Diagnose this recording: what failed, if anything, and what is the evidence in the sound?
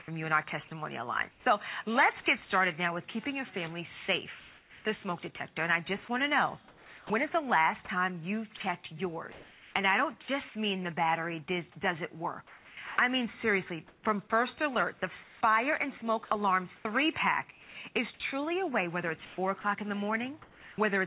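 At 0.68 to 0.71 s a sliver of sound vanishes and a flat hiss briefly takes its place. About 30 ms is replaced, and roughly 20 ms of real sound is lost. This is sound dropped by the voice detector, at the call-processing stage. The sender's detector likely mistook a quiet fragment for background and stopped transmitting, so the receiver filled the gap with synthetic noise. The band is limited to 4 kHz throughout, which fits a G.711 A-law call path at 64 kbps.

From 0.68 to 1.46 s the background loses its texture in places and turns into a smooth, even hiss, about 180 ms of it in total. This is comfort noise in place of the background. It is likely discontinuous transmission in the call processing: with no activity detected, the sender went quiet and sent only a noise description, and the receiver generated featureless noise shaped roughly like the real background.

Two long stretches sound choppy: 4.4 to 10.28 s and 12.47 to 20.78 s. 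Pieces of sound drop out and are replaced by synthetic noise. About 1.38 s is replaced in the first stretch and about 1.59 s in the second. This is sound chopped by the voice detector. The sender likely toggled transmission on and off repeatedly, and comfort noise filled each gap.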